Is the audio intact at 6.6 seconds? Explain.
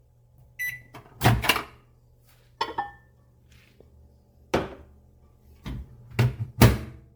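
No, at 6.6 s there's generation loss running through the whole clip: a swirly, hollow sound with smeared attacks, likely from roughly ten MP3 re-encodes near 96 kbit/s.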